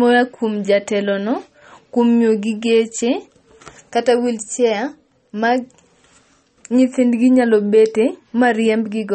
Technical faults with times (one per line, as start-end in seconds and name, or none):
0.00-9.14 MP3 compression